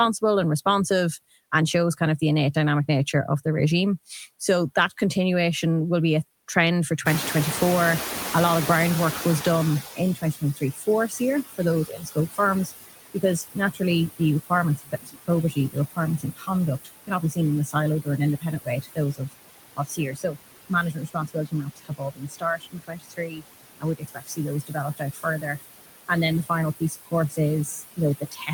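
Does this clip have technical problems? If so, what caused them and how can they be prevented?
Yes. Noise suppressor artifacts run through the whole clip. The suppressor pulls down whatever it judges to be steady noise by about 18 dB, band by band and frame by frame. So the background sinks in the gaps and rises again under the speech. What remains can flutter or warble. Prevention: reduce the noise at the source, or run the suppressor less aggressively so it leaves a smoother residue.

Speech cut by the noise suppressor appears from 1.97 to 3.14 s. Only about a tenth of a second in that span is affected. There the level dips by up to about 11 dB. It happens again from 9.84 s to the end, with drops of up to about 22 dB. In both places the suppressor mistook parts of the speech for noise and turned them down with the background. Those parts sound swallowed or faint. Prevention: lower the suppressor's strength or raise the speech-to-noise ratio so speech is not misclassified.

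The noise suppressor catching up shows from 7.05 to 10.41 s. The room noise jumps by about 21 dB at about 7 s. The suppressor's estimate lags, so the louder noise comes through with less reduction at first. It sinks over about 3.4 s as the estimate adapts, reaching a cut of about 15 dB. The room noise itself is part of the recording, sitting about 10 dB below the speech after the rise. Prevention: use a faster-adapting noise estimator, or avoid sudden noise changes near the microphone.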